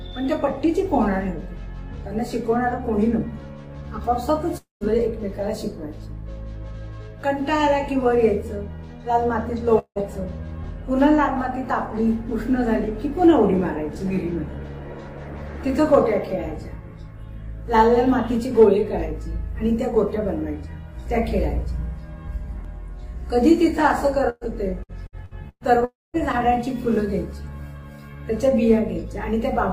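The audio drops out three times, at 4.57 to 4.84 s, 9.79 to 9.99 s and 25.85 to 26.17 s. Each time the last sound is stretched into a fading buzz or hiss, then goes silent for about 140 ms, 80 ms and 210 ms respectively before resuming further along with material missing. About 240, 180 and 300 ms of audio are lost, which points to a long network dropout as the likely cause, with the receiver bridging the hole until nothing remained to extend. At 24.30 to 24.44 s there is a shorter hiccup: the sound briefly freezes into a held buzz or fading hiss and picks up roughly 120 ms later, skipping what came between. This is a burst of packet loss, where the receiver covers a short run of missing data by continuing and turning down the preceding sound, leaving only a brief moment of true silence. From 24.83 to 25.64 s the audio turns choppy, broken by five small holes totalling about 300 ms, the longest about 116 ms, so roughly a third of that stretch is patched rather than real. 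That is repeated packet loss, with each gap filled by extending the last fragment before the next gap follows almost at once, producing the stuttering texture just before the final dropout.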